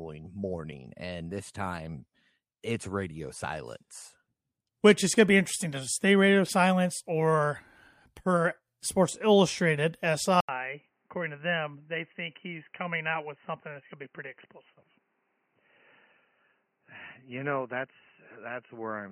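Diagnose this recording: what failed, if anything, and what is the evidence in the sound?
At 10.41 s, right after "or per sports illustrated", the speech goes dull and boxy and stays that way to the end. A gap of about 80 ms comes first. After it, nothing reaches above 3 kHz. The level drops by roughly 5 dB, and a new noise floor appears well below the speech. The likely cause is an input switched to a poorer device at the driver stage. A narrower-band device took over, bringing its own tone, gain and background noise.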